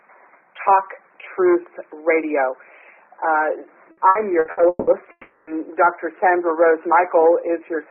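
From 3.91 to 4.90 s, repeated packet loss makes the sound choppy. Five gaps, the longest 180 ms, are patched by repeating earlier sound.

At 5.11 s the audio turns into a fading buzz or hiss, briefly silent, and returns at 5.50 s with 360 ms missing. A long network dropout is the likely cause.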